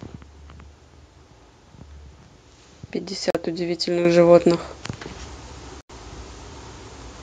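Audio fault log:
3.30–3.35 s, Bluetooth dropout: the speech cuts to silence for about 44 ms and then picks up further along, as though it had kept playing underneath. This is likely a Bluetooth link losing a short burst of packets before they reached the headphones. What separates it from a recording glitch or a stutter is that nothing repeats and nothing is stretched. The missing stretch is simply gone.
4.05 s, microphone volume stepped up: the level of the speech and the room behind it jumps by about 9 dB at one instant, in a single step. The call software judged the microphone too quiet and raised the device's input volume. Because the background noise rises together with the voice, this is a change at the input. A talker getting louder would lift only the voice, and an automatic gain control would ramp the level rather than snap it.
5.07 s, microphone volume stepped up: a second, smaller jump of about 3 dB follows a second later, again lifting speech and background together in one instant step. 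It is the same software correction nudging the input volume higher after the first raise. The abrupt edge and the equal rise in the noise floor set it apart from a natural swell in speaking level.
5.81–5.90 s, Bluetooth dropout: a longer hole of about 87 ms, roughly twice the first one, where the output goes silent and then resumes later in the speech, with the gap skipped over rather than delayed. This is likely the same wireless link dropping more packets this time. The clean silence distinguishes it from a level dip or a fade, and the lack of any repeated material rules out buffer looping.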